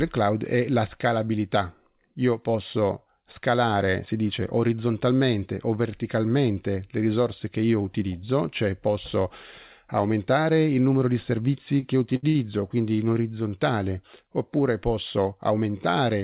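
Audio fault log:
11.80, 12.16–12.25, 12.29–12.36 s: short stall from a late packet. The jitter buffer ran empty, so the last sound was held 22, 63 and 58 ms until each packet arrived, with nothing skipped.
15.18–15.66 s: jitter buffer speed-up. The receiver trimmed surplus buffered delay by dropping about 50 ms in pitch-period pieces, so the sound runs 10% faster at the same pitch.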